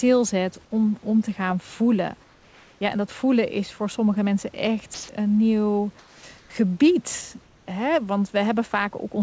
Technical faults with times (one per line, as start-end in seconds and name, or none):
2.24-2.81 comfort noise in place of the background
4.94-5.09 sound dropped by the voice detector
5.99-6.50 comfort noise in place of the background
7.43-7.67 comfort noise in place of the background